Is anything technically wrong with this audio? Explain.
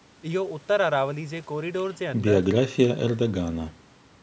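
No, the speech shows only the ordinary effects of call microphone processing, with nothing above 8 kHz and the lowest bass trimmed by its high-pass filter, both expected for this path.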